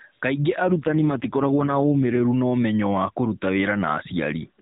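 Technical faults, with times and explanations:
0.64–2.21 s, AMR rate drop: the speech turns rougher, buzzier and more synthetic, which fits the codec stepping down from 12.2 to 4.75 kbps on a weak link, then clears before "na ũmenyo wa kũruta". Unlike a dropout, there is no gap, and the 4 kHz top stays put.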